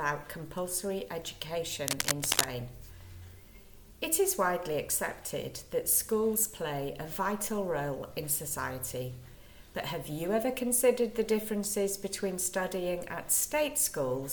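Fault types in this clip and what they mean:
Cable scratch noise: From 1.83 to 2.47 s, dense, uneven scratching and rustling sits over the sound. It is roughly as loud as the signal itself. It likely comes from a worn cable or connector being moved, its contact resistance jumping rapidly.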